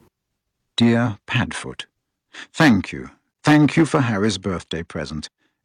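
From 0.81 to 0.95 s, microphone overload adds a harsh crackle to the loudest syllables, likely because the input gain drove peaks about 5 dB past the converter's limit. On the waveform, roughly a sixth of the samples sit flat where the converter's limit cut them off, and the spectrogram shows broadband smearing above the voice. At 0.83 s, inside that burst, the microphone volume is stepped down by about 2 dB, likely the call software reacting to the clipping. Voice and background drop together, seen as an abrupt step in the waveform envelope. From 2.6 to 2.73 s the overload returns, harsher, about 11 dB over, with nearly a third of the samples squared off. A longer overload runs from 3.47 to 4.28 s, about 9 dB over but with only a few flattened peaks. Within it, at 3.96 s, the volume steps down again by about 2 dB.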